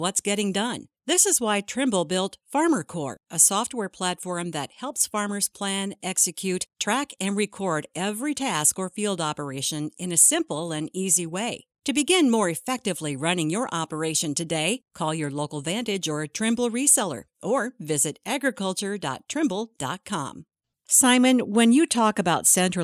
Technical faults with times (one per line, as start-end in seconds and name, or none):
none